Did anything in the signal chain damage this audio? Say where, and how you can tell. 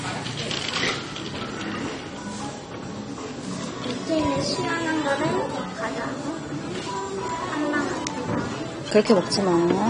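Yes. The codec stage is the likely culprit: lossy AAC compression across the whole clip, consistent with AAC-LC at around 32 kbps. Nothing is present above 9.7 kHz, so highs sound dull, and starved bands leave a smeared, warbling, fizzy texture.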